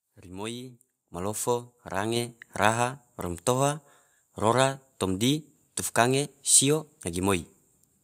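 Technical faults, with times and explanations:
1.14 s and 2.16 s, microphone volume stepped up: input gain jumps about 8 dB, then about 4 dB, instantly, lifting background with speech, unlike a speaker moving closer.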